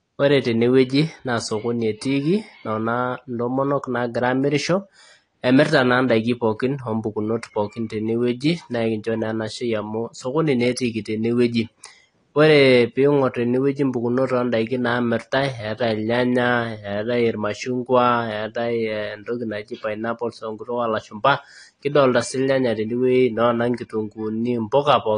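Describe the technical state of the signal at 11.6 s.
At 11.6 s the speech carries the same damage heard throughout the clip: dull, smeared audio with a warbling, fizzy texture on sustained sounds and sibilants, and nothing above 10.1 kHz. The likely cause is AAC compression (AAC-LC) at a low bitrate, consistent with 32 kbps. The encoder quantises each frame's spectrum so coarsely that bands thin out or are replaced with noise. Unlike a simple low-pass filter, the damage reaches below the cut-off too.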